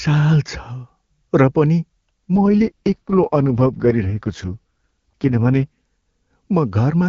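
From 2.35 to 5.67 s an AMR rate drop, consistent with 23.85 falling to 6.6 kbit/s, starves the coder, so speech turns raspy and synthetic without gaps.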